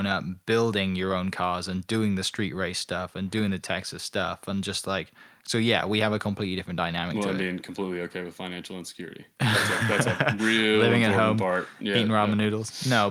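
Listening closely to the speech recording, nothing stood out as a technical fault at any point.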